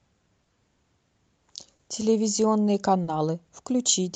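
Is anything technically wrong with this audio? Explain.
Yes. The speech carries two timing faults, heard through an Opus-coded call path whose top end stops near 8 kHz.

Clock drift between sender and receiver runs through the whole clip. The sending clock is slow, by around 3 percent. The receiver's jitter buffer keeps draining, so it must repeatedly pad or repeat small slices to keep playing. The result is small, irregularly spaced hitches and slight unevenness in pacing from start to finish. It differs from isolated stalls because the hiccups are spread throughout rather than tied to a few moments.

Short stalls from a late packet occur at 0.43 to 0.50 s, 1.75 to 1.82 s and 3.03 to 3.10 s. Each time a packet arrived late and the buffer ran dry. The receiver held the last sound for about 40 ms, then resumed exactly where it left off. Nothing is lost, but a sound lingers unnaturally with a slight buzzy or dipped texture. 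Unlike a dropout or packet loss, the speech continues seamlessly with no gap or skipped material.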